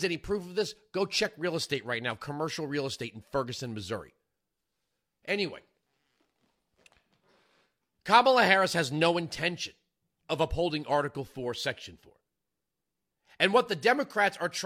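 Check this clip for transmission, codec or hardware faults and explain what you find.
Nothing wrong can be heard anywhere in the recording.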